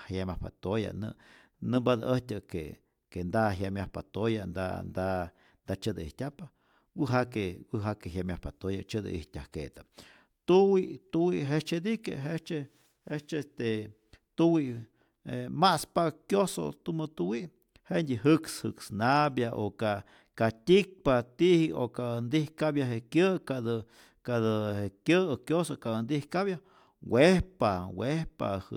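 Nothing in the recording stood out as a technical problem on listening.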